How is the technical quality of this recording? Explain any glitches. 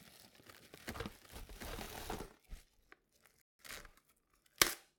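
The technical quality is poor. Three distinct faults affect the audio: a doubled track, recurring chunk-overlap stutters, and a brief playback stall.

Doubled audio track, from the start to 2.23 s: the fault is already under way when the clip begins. A second full-band copy of the sound trails the original by roughly 0.7 s, about 5 dB quieter. It is likely caused by the audio being captured a second time through a slower path, or by an edit leaving two out-of-step copies. The copy carries no decay or room colour, so it sounds like a flat, delayed repeat rather than an echo. It cuts off abruptly at 2.23 s.

Overlapping chunks, at 0.82–0.84 s, 1.84–1.87 s, 2.87–2.89 s and 3.89–3.91 s: the audio was handled in 1 s blocks, and each block began slightly before the previous one finished. At every join, a 23 ms slice plays twice. This produces a small click or stutter once per second, at a steady rhythm.

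Rebuffering stall, 3.42–3.59 s: the player ran out of buffered audio and paused until more arrived. The sound drops to silence for about 176 ms, then resumes exactly where it stopped. Nothing is skipped, but the gap stretches the timing and breaks the flow.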